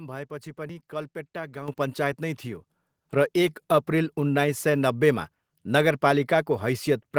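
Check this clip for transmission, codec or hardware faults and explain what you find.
The clip has one hardware-control fault, occurring twice. Microphone volume stepped up at 1.68 s by about 8 dB and again at 2.7 s by about 4 dB: software raised the device's input gain in single steps, so speech and background jump louder together.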